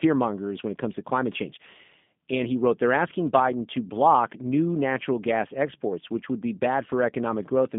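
From start to finish the speech carries plainly audible G.729 codec damage, a rough, slightly synthetic quality consistent with 8 kbit/s G.729A, which rebuilds each frame from a vocal tract model and sparse pulses. The spectrogram shows a narrow 150 Hz to 3.6 kHz band, empty above 3.7 kHz.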